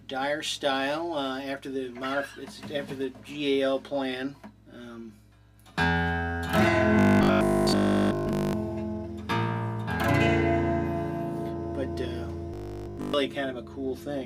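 From 6.99 to 8.53 s and 12.54 to 13.14 s, the audio becomes a rigid 50 Hz buzz. This is likely robotic sound from repeated short buffers, near 20 ms each.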